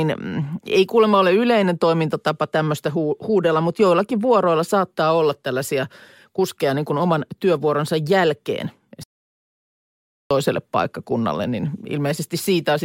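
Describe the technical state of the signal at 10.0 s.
At 10.0 s the speech is inside a playback stall running from 9.03 to 10.31 s, about 1.27 s of dead silence after "kuin oman työvuoronsa jälkeen", resuming at "paikkakunnalle niin". The player likely ran short of data. The waveform shows a flat line, the spectrogram a blank vertical band.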